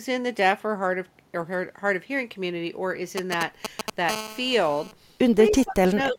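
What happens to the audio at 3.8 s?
At 3.8 s the speech is overlaid with GSM signalling bursts, running from 3.18 s to 3.9 s. A nearby 2G phone is signalling, and the audio circuitry rectifies its radio bursts into a galloping dit-dit-dit of short buzzes pulsing at about 217 Hz, roughly as loud as the speech. Unlike steady mains hum at 50 or 60 Hz, this interference comes in stuttering groups that start and stop abruptly.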